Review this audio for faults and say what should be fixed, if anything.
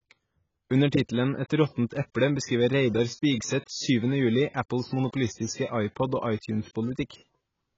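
Throughout, the speech sounds dull and smeared, with a fizzy, warbling texture on sibilants and nothing above 7.6 kHz. The likely cause is heavy AAC compression at a bitrate around 16 kbps, which forces the encoder to lower its cut-off and starve frequency bands of bits. Encode at a higher bitrate to prevent it.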